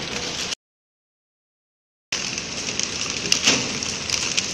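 From 0.54 s to 2.13 s the sound drops out to silence: about 1.6 s of silence with no room tone, likely from lost input.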